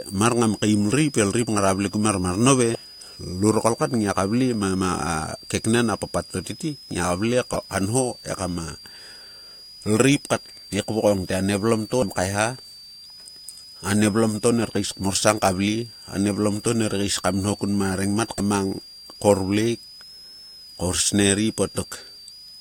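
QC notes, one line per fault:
Throughout: switching supply whistle. A high, thin whistle wanders between about 4.56 and 5.25 kHz, sitting around 5 kHz at roughly 20 dB below the speech. A switching power supply cycling in an audible burst mode, or beating against another supply, puts its ripple straight into the band. On a spectrogram it is a narrow horizontal line near 5 kHz that drifts and steps in pitch as the load on the supply shifts, running underneath the whole recording.
2.72–2.75 s, 7.53–7.56 s, 11.99–12.03 s, 18.37–18.40 s: damaged data in a compressed stream. Each is a brief chirp, squawk, click or short hole of about 33 ms. Corrupted bytes in the encoded stream leave the decoder misreading or discarding a frame, losing sync and hunting for the next valid header. The waveform shows an abrupt discontinuity at each point.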